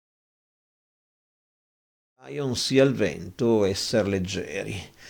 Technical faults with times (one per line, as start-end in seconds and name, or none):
none